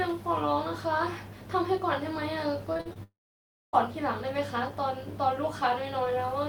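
From 2.73 to 2.97 s the stream suffers repeated packet loss, four short gaps with the longest about 42 ms, each patched by extending the previous sound. With around 41% of that span filled in, the speech turns choppy and robotic, with pieces missing.

Just after, from 3.03 to 3.75 s, what sounds like a long network dropout likely cut off about 0.7 s of audio. The last sound is stretched into a brief fading buzz, then roughly 0.6 s of silence follows before speech resumes with that part gone.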